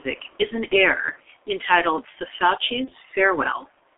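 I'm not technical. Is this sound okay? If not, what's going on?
No. G.723.1 codec, throughout: the speech passes through an old internet-phone compression scheme that keeps only roughly 300 Hz to 3.6 kHz and simplifies the voice heavily, so it sounds muffled and rough, with smeared consonants.

VoIP packet loss concealed by the speech codec, at 0.68 to 0.76 s and 2.85 to 2.92 s: a small piece of audio went missing each time, which fits one lost 30 ms chunk. The decoder filled the gap by guessing from the preceding sound, briefly leaving a fading blur.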